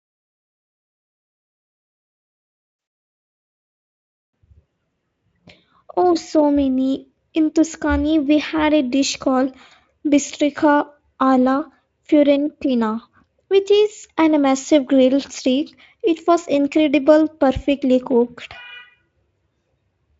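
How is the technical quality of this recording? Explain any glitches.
The recording has two brief glitches in the speech, both VoIP packet loss concealed by the speech codec. The Speex coding is at a setting high enough that its own hoarseness is faint at most.

The first gap runs from 2.79 to 2.87 s, about 80 ms, consistent with four 20 ms frames going missing. The second runs from 9.67 to 9.73 s, about 40 ms, right after "had a dish called" and before "bistrica alla fiorentina which". In each, the decoder extended the last pitch and spectral shape it had while turning the level down frame by frame. The result is a short stretched tone or coloured noise that fades out instead of a gap. Unlike a plain dropout or click, there is no silence or sharp edge, and the voice stays weak or distorted for tens of milliseconds as it recovers.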